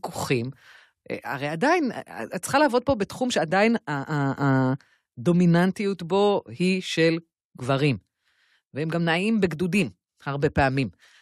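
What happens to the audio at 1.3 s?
At 1.31 s, compressed frames are skipped. About one frame, roughly 20 ms of speech, never plays. The decoder jumps ahead by one 23.2 ms frame, so the speech jumps forward at the join.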